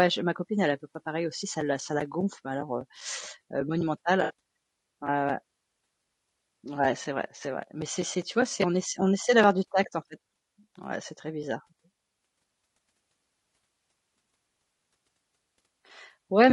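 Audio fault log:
throughout: low-delay AAC compression. The speech sounds rough and grainy across the whole clip, with noise filling the gaps between voice harmonics and a thin, synthetic-sounding top band. This is likely AAC-ELD at around 32 kbps. Its short frames, about 20 ms, give coarse frequency resolution, and at this bitrate the bits run short. The damage is steady from start to finish, which tells it apart from a local dropout.
4.23–4.33 s: AAC frame loss with concealment. For about 94 ms the sound turns smeared and noisy, a brief phasey patch where detail vanishes. Around 60 ms of coded audio, which fits three frames, never arrived, and the decoder rebuilt it from the last good spectrum with scrambled phase. The gap was too short to fade toward silence, so it is heard as a blur rather than a click or a cut-out.
9.51 s: dropped samples. A single sharp click falls between "ess on essaie d'avoir" and "du tact en fait". 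A handful of samples, on the order of a tenth of a millisecond, likely went missing, so the waveform jumps abruptly to a later value. No sound is audibly removed. That tells this instantaneous tick apart from the smeared concealment patch at 4.23 s.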